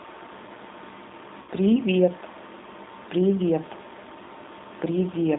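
The speech sounds thin and boxed-in throughout, with nothing below about 200 Hz or above about 3.7 kHz. It has a plainly audible rough, slightly synthetic grain. This is the signature of the G.729 codec, here the G.729A variant at a rate that fits 8 kbit/s. It rebuilds each 10 ms frame from a vocal tract filter, a pitch predictor and a handful of pulses, so fine detail in the voice is replaced by a coarse approximation. From 1.42 to 1.50 s the voice briefly smears into a buzzy tone or coloured noise that fades before clearing. This is VoIP packet loss concealed by the speech codec. About 60 ms of audio went missing, which fits six lost frames. The decoder filled the gap by repeating its last pitch and filter with falling gain, and the sound stays weakened for a moment after packets resume because each frame builds on the previous one.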